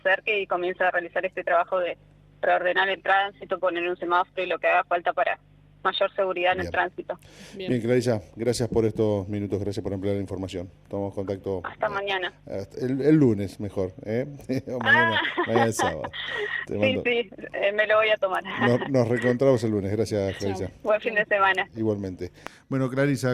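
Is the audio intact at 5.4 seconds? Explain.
Yes, the audio at 5.4 seconds is intact, with no dropout, click, distortion or other fault to be heard at that moment.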